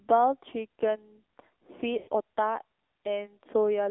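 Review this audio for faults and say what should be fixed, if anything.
The AMR narrowband mobile codec shapes the whole clip. The speech passes only between about 250 Hz and 3.7 kHz, and the vocal-tract model leaves it plainly buzzy and synthetic, which fits a low mode near 7.4 kbps. A spectrogram shows a hard ceiling with nothing above 3.7 kHz. Prevent this by carrying the call over a wideband or higher-rate codec.

Lost AMR speech frames cause a gap from 1.98 to 2.09 s, about 100 ms, which fits five consecutive 20 ms frames failing. The decoder stretches the last pitch and spectral settings while the gain drops, so the sound smears and fades. On the waveform the envelope decays smoothly toward silence, and the spectrogram shows frozen, fading harmonics. Prevent this with stronger channel protection or better radio coverage.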